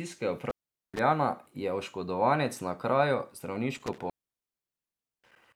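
At 0.46 s the speech drops out through an intermittent contact, a loose cable or plug briefly losing connection, and the signal stays open for about 0.42 s before returning at 0.99 s. Crackle marks each edge, with faint hiss in the gap. A second, longer break begins at 3.78 s, right after "je oškodovanec na kraju", and the line stays open for about 1.14 s within the span running to 5.56 s.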